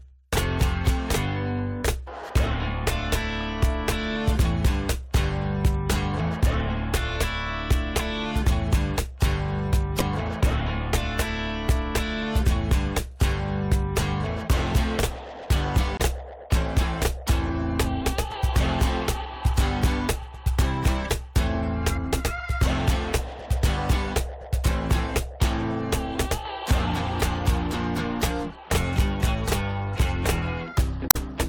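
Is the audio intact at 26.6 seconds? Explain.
Yes, at 26.6 seconds the audio plays through cleanly, with no dropout, click, distortion or other fault audible at that moment.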